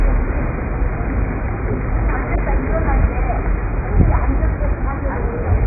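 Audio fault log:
Throughout: AAC compression. Nothing above 2.5 kHz and heavy smearing with warbly texture; likely a very low-bitrate AAC-LC encode, fitting roughly 12 kbps.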